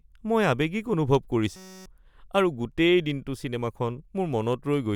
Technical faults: system hang loop

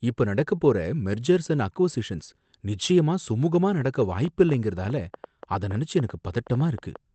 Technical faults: train of clicks

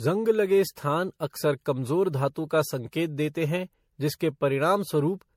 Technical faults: generation loss

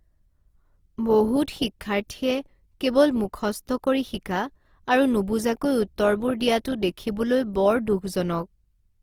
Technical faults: Opus compression

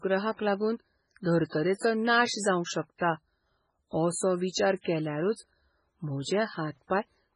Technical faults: MP3 compression

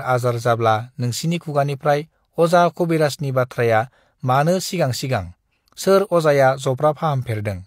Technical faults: none

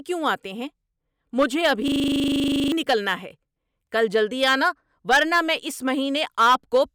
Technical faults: system hang loop

